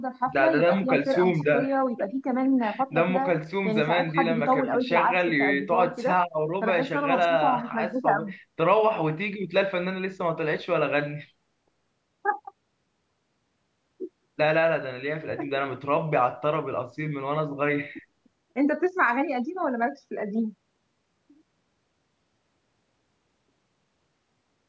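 Nothing stood out on listening to this speech, which carries the ordinary marks of a call's microphone processing, with the lowest bass trimmed and nothing above 8 kHz.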